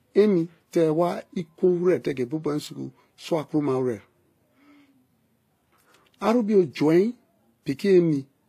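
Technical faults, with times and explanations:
throughout: transcoding between lossy codecs. The speech carries two layers of coding damage at once: the smeared, slightly metallic texture of a low-rate codec with band replication, and a second set of quantisation artefacts on top. Content stops at about 14.9 kHz. The likely cause is an HE-AAC encode at around 20 kbit/s later re-encoded to WMA at 96 kbit/s. The second encoder spends its bits preserving the first one's artefacts, so the higher rate recovers nothing.
2.65 to 2.67 s: chunks out of order. A short block of audio, about 10.7 ms long, plays one block later than it should, swapping places with its neighbour. No audio is lost, but the waveform is cut at three hard joins instead of flowing continuously. These discontinuities produce a brief stutter, a momentary jumble in the speech rather than a gap.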